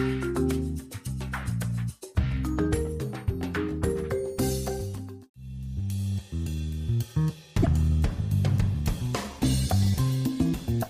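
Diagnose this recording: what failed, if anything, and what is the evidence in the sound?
Codec stage: damaged data in a compressed stream at 7.59–7.67 s. The decoder misreads corrupt frames and resyncs, giving a brief chirp, squawk, click or short hole.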